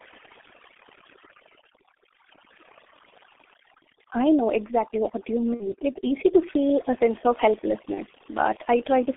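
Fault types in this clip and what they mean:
Overdone noise removal: a noise suppressor set far too aggressively pulled individual frequency bands down whenever they sat near its noise estimate, taking quiet parts of the speech with them, so pauses drop and break up into twinkling specks.
G.723.1 codec: the speech went through this early internet-telephony codec at 6.3 kbit/s in 30 ms frames on a line passing roughly 250 Hz to 3.5 kHz, and the heavy coding damage leaves the voice muffled and hoarse with smeared consonants.
VoIP packet loss concealed by the speech codec: packets went missing and the decoder filled the gaps by extending its last pitch and filter state at falling gain, heard as a stretched, fading smear from 5.54 to 5.75 s and a shorter one from 7.94 to 8.00 s.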